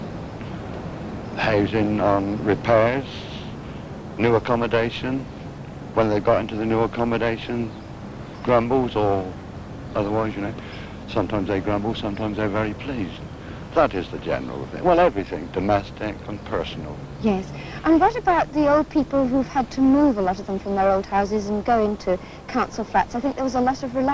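The audio holds steady throughout, with nothing audible in the signal pointing to a technical fault.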